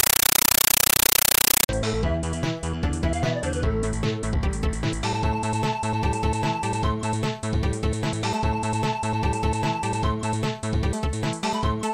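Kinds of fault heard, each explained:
Compressed stream played as audio, 0.00 to 1.69 s: encoded data, which fits an AC-3 stream, is output as plain samples without decoding. Each frame becomes a 9.33 ms noise burst and then silence, repeating 31.25 times a second as loud chattering static.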